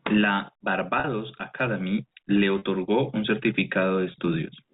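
Packet loss with pitch repetition occurs at 1.00–1.04 s, 2.58–2.62 s and 4.12–4.14 s, gaps of 40, 40 and 20 ms that fit lost 20 ms packets. The receiver repeats the last pitch period across each gap, giving a brief held, buzzy note over the band-limited G.711 telephone audio.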